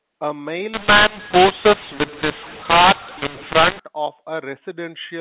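From 0.74 to 3.80 s the speech goes harsh and distorted, with pauses hissing: mu-law and A-law mixed up, A-law telephone audio decoded as mu-law.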